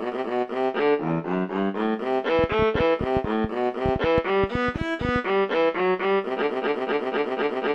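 From 2.39 s to 5.17 s a train of clicks runs over the sound: around thirty sharp, near-identical ticks at about 9 per second, spaced unevenly, each standing out roughly 10 dB above the material and audible in the gaps too. The likely cause is interference from nearby equipment or a faulty connection or power supply. The repeated same-shaped pulses set it apart from a single pop or random crackle.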